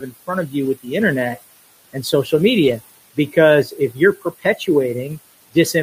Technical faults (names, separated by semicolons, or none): noise suppressor artifacts; lost packet rebuilt from error correction; speech cut by the noise suppressor